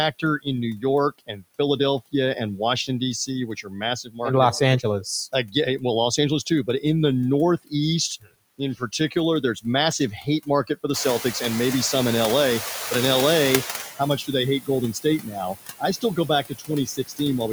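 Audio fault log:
Throughout: noise suppressor artifacts. The steady background is pulled down by about 15 dB, band by band and frame by frame, so it dips in the pauses and swells back under the speech.
0.12–1.44 s, 2.12–4.2 s, 4.83–6.84 s, 7.65–11.25 s, 13.96–17.41 s: speech cut by the noise suppressor. Quiet consonants and word endings are treated as noise and drop by up to about 17, 15, 11, 21 and 21 dB. They sound swallowed, for roughly 0.4, 0.4, 0.3 and 0.7 s in the earlier runs and about one and a half seconds in the last.
10.93–13.9 s: noise suppressor catching up. The room noise jumps by about 16 dB near 11 s and settles roughly 10 dB below the speech. The suppressor's noise estimate lags, so the louder background comes through with less reduction at first. It then sinks over about 3 s until the cut reaches about 12 dB.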